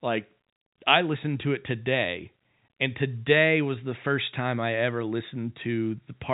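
No technical faults are audible.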